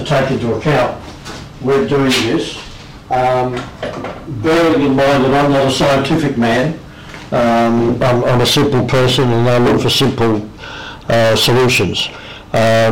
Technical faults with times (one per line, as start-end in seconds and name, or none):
0.00-12.91 hard clipping